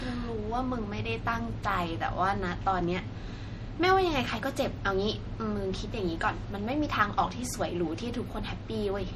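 It's a speech clip, and the trouble runs the whole way through: low-bitrate audio saved at a high bitrate. The file has no content above about 19.9 kHz, and the speech carries the coarse, smeared character of heavy MP3 compression, which fits a 48 kbit/s pass later re-saved at 320 kbit/s. The likely cause is that re-encode. The bigger file just preserves what the first encode already threw away, so it can't restore any of that detail.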